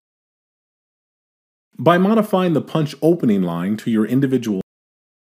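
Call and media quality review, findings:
Cut-off end at 4.61 s: final buffers never written or played out, so the sound stops mid-event and drops straight to digital silence, no decay.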